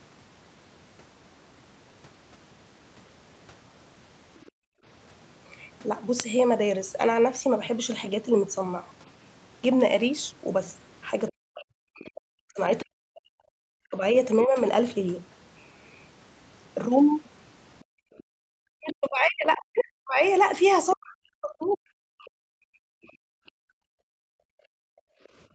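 At 4.46 s a brief, very faint second voice appears, the other side's voice leaking through, likely loudspeaker echo the canceller missed. On a spectrogram it shows as a weak harmonic smear below the 8 kHz ceiling. Straight after, from 4.51 to 4.84 s, the background is gated by the echo canceller: room tone drops by about 38 dB, leaving a near-empty gap in the waveform's noise floor. From 11.3 to 12.84 s the leaked voice returns, only about 20 dB under the talker. Across 11.3 to 14.59 s speech is suppressed in double talk, likely because the canceller could not separate talker from echo. The voice dips by as much as 40 dB for about 2 s in all. Leakage recurs, quieter, from 17.25 to 21.66 s. The background gates again from 17.85 to 18.43 s, by about 39 dB. Double-talk suppression then affects about 3 s between 18.71 and 22.62 s. From 22.67 s to the end the background is gated by about 40 dB.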